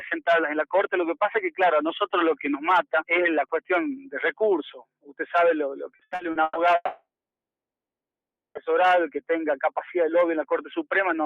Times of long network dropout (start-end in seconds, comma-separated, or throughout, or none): 6.75-8.58